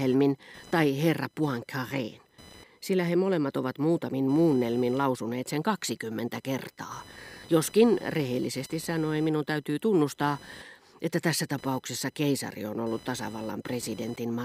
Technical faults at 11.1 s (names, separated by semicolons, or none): computer activity noise